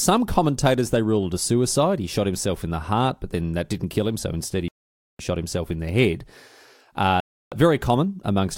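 The speech drops to dead silence from 4.68 to 5.20 s, about half a second, and again from 7.20 to 7.52 s, then resumes each time. This is likely a Bluetooth stall: interference delayed packets, the headphones' buffer emptied, and playback waited for retransmissions.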